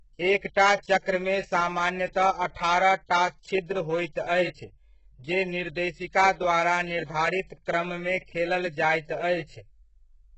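HE-AAC compression runs through the whole speech clip. Nothing survives above 8 kHz, and the treble sounds heavily damaged and synthetic, which fits a very low bitrate of around 8 kbps. The likely cause is spectral band replication copying lower bands upward, so sibilants turn gritty and metallic.

Pre-echo appears from 0.54 to 0.56 s, just before "'चक्र'मे सामान्यतः". A short hiss smeared over about 21 ms precedes the attack, because the codec spread quantisation noise sized for the loud onset across the quiet moment before it, softening that onset.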